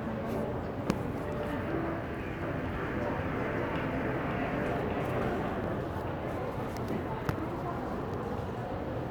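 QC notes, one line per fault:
2.42–5.50 s, doubled audio track: a second, full-band copy of the sound runs about half a second behind the original and about 5 dB quieter, with no decay or room colour, so it reads as a flat echo rather than reverb. It is likely a second capture path or an overlapping edit. On the waveform, each transient has a smaller twin about half a second later. The spectrogram shows a time-shifted ghost of every event that starts and stops abruptly at these boundaries.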